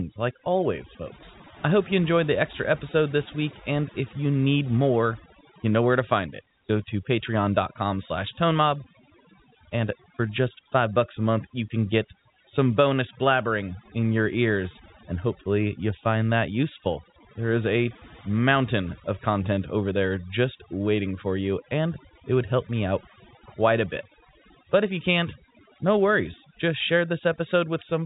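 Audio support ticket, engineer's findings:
Overdone noise removal, whole clip: background dropped and broken up into twinkling specks, quiet parts of speech lost. Suppressor too aggressive, dropping bands near its noise estimate. Spectrogram: isolated dots between phrases, ragged holes in quiet harmonics, all under the telephone-band ceiling near 3.8 kHz.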